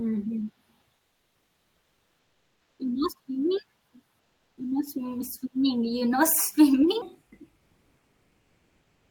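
From 0.95 to 2.79 s, and again from 4.19 to 4.57 s, the pauses in the speech get comfort noise in place of the background. The real room sound, already about 47 dB below the loud parts, drops out and is replaced by a flat, featureless hiss about 2 dB quieter. That's likely Opus discontinuous transmission: the sender goes quiet when it detects no speech, and the receiver fills the gap with synthetic noise.

From 7.02 s to the end at 9.11 s, the section is at the wrong speed, playing at 0.752 times its proper rate. Because speed and pitch shift together, everything in that stretch sounds slower and deeper, dropped by roughly five semitones. The likely cause is that this part was played or edited against the wrong clock.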